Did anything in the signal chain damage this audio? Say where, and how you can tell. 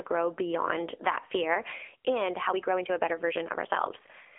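Yes, two places. The codec stage applied AMR narrowband mobile coding throughout: nothing above about 3.5 kHz, buzzy synthetic speech, which fits roughly 7.95 kbps AMR-NB.

From 2.40 s to the end, right after "beyond that fear and", there's a time-stretched section running about 1.5 times faster with pitch unchanged, rushed, likely from pitch-preserving speed-up in editing or playback.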